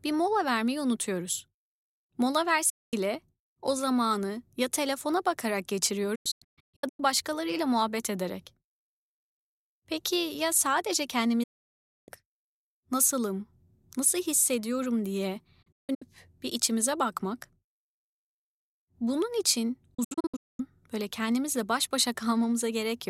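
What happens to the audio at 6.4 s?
At 6.4 s the speech is in the middle of a digital broadcast dropout running from about 6.15 to 7.00 s. The receiver failed to decode incoming frames and muted until good ones arrived, so the sound breaks into several short holes. About 0.6 s is lost in total, and the longest single gap is about 0.13 s. Each mute has an 8 ms fade. On a waveform these show as flat-line gaps, and on a spectrogram as blank vertical stripes across all frequencies.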